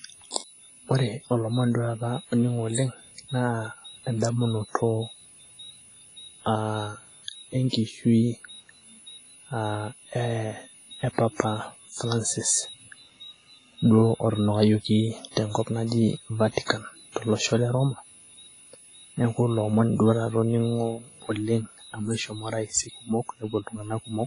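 From start to finish the speech carries a switching supply whistle, a high tone of about 10 kHz that wanders between roughly 9.7 and 10.1 kHz, sitting about 25 dB below the speech. A power supply is cycling in an audible burst mode or beating against another supply, and its switching frequency leaks into the audio path. Unlike mains hum, which is low and locked to 50 or 60 Hz and its harmonics, this is a thin high-pitched line that shifts slightly in pitch rather than holding one exact frequency.

Also running throughout is heavy codec damage, most likely from WMA compression at a low bitrate, consistent with something around 24 kbps. The transform coder spreads its quantisation noise over long blocks, so the speech sounds ringing and washy, with a hiss that swells and falls along with the voice, and weaker spectral detail is dropped. Nothing remains above about 10.1 kHz. That cut-off sits just above the whistle, which survives as the highest content in the clip. 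The hiss moves with the signal, which separates it from a steady noise floor.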